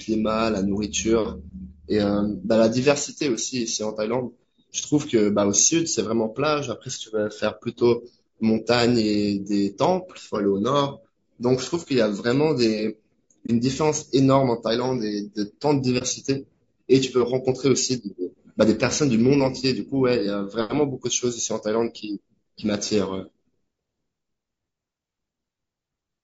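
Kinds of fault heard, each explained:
Low-delay AAC compression: Throughout the speech there is plainly audible roughness and graininess, with a noisy fill between the pitch harmonics and a thin, somewhat synthetic top band. This is likely the low-delay AAC used in video calls: its short frames resolve voice harmonics coarsely, and the amount of damage points to a low bitrate around 32 kbps. It differs from a plain low-pass filter because the upper band is still present but sounds artificial rather than simply missing.
AAC frame loss with muting: The speech briefly drops out twice, at 13.46 to 13.51 s and again at 15.98 to 16.03 s. Each gap is a brief dip with about 30 ms of missing sound, which fits a single lost frame. The decoder zeroed the spectrum for that frame, and the overlapping windows fade the audio down and back up. That gentle fade is what separates it from a hard dropout or buffer underrun, which cuts off abruptly.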